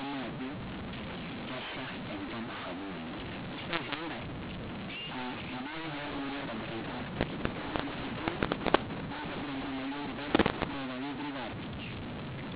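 Harsh, grainy distortion runs through the whole speech clip, with levels scrambled and pauses filled with hiss: a mu-law and A-law mix-up, A-law telephone audio decoded as mu-law.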